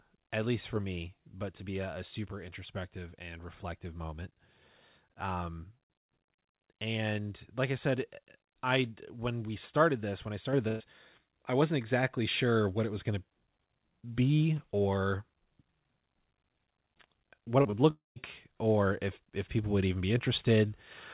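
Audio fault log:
10.53 s microphone volume stepped up. The whole sound, speech and background together, jumps up by about 5 dB in a single step. The call software judged the microphone too quiet and raised the device's input gain at once. Nothing ramps. The level simply sits higher from that instant on, so the change is abrupt rather than smooth, and the room noise rises with the speech.
10.68 to 10.82 s burst of packet loss. About 120 ms of audio never arrived in time. The receiver kept the last sound going for roughly 119 ms and faded it down across the gap, so a voiced sound turns into a held buzz and an unvoiced one into a fading hiss. Speech then picks up further on, with the missing stretch simply gone. It lands just after the volume step.
17.62 s and 17.70 to 17.74 s short concealed packet loss. Two holes of about 20 ms each. Each time the receiver continued the last sound, from its pitch if voiced or as shaped noise if not, for roughly 20 to 24 ms, then blended back into the real signal. 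The result is a brief smear or wobble. A quick consonant could drop out inside either one.
17.90 to 18.18 s long network dropout. A stretch of about 260 ms is lost, likely because no packets reached the receiver. First comes a continued buzz or hiss that fades away. Then about 160 ms of silence follows before the audio returns further along, without the lost part. It follows closely on the two short losses, so the whole passage sounds broken up.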